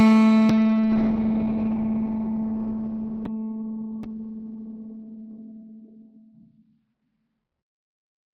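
At 0.53 s the music undergoes a call bitrate drop that lasts to the end of the clip. The encoder was starved of bits, which fits a fall from 32 kbps to 8 kbps. The top end narrows from 20 kHz to 4 kHz, and the sound turns muffled and watery, worst over a 2.71 s stretch. Unlike packet loss, there are no gaps or stutters, just continuous coarse coding.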